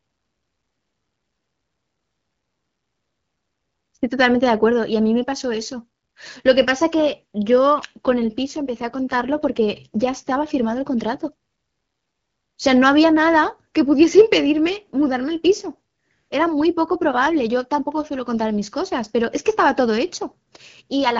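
From about 7.76 s to 10.46 s the speech goes rougher and more synthetic, then clears up again. That's an AMR rate drop: the network told the AMR-WB encoder to step down and put more of its bits into error protection, and the extra roughness points to a switch from 12.65 to 8.85 kbit/s. The bandwidth holds steady and nothing drops out. The codec simply has fewer bits to model the speech with until the higher rate comes back.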